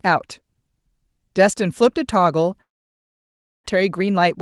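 Long network dropout, 2.61 to 3.68 s: a brief fading buzz, then about a second of silence, with 0.7 s of speech lost, likely through undelivered packets.

Jitter buffer speed-up, 3.76 to 4.35 s: pitch-period slices totalling around 50 ms are cut to drain the backlog, so speech hurries 9% faster at unchanged pitch.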